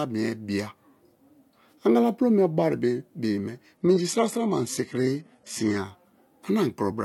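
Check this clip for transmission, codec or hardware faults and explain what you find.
One fault here, a brief adaptive stream at a lower bitrate. From 3.77 to 5.77 s the stream drops to a lower-bitrate version, likely after the connection slowed. The speech turns thinner, with nothing above 11.8 kHz. It switches abruptly, with no gap, as though jumping to a low-rate HE-AAC stream.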